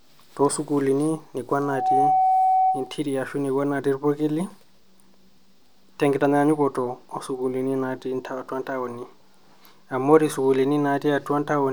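At 1.6 s a loudspeaker feedback squeal kicks in: the mic is hearing its own speaker, and at 752 Hz the loop gain tops one, so that tone feeds itself. It swells over a fraction of a second into a steady whistle sitting a bit louder than the speech, and hangs on until 3.01 s.

Right inside that squeal, at 2.87 s, there's a block of digital silence, a 2.67 ms dropout where the sound cut out without any fade. A gap that short comes across as a tick or dip, and the length fits a 128-sample buffer that wasn't filled in time.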